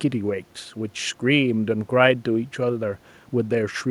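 No technical faults can be heard.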